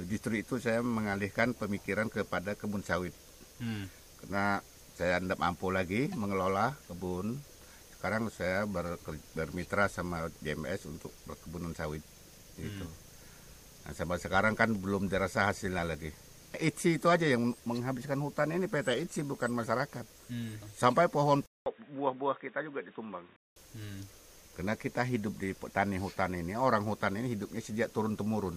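Input switched to a poorer device, from 21.46 s to 23.56 s: the sound drops out for about 200 ms, then returns duller and a few decibels quieter, with nothing above 3.8 kHz and a new, faint background noise well below the signal. The likely cause is the recording path changing to a different, narrower-band microphone or headset profile, which brings its own tone, level and noise until the original input returns at 23.56 s.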